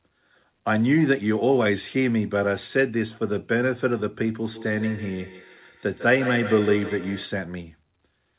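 Feedback echo between two devices runs from 4.53 to 7.39 s in this speech clip: a second device replays the audio into a nearby microphone, so each word returns roughly every 150 ms, at about -11 dB, sounding thinner and more ringing. The sound tops out at 4 kHz, which fits a narrowband G.711 A-law call path.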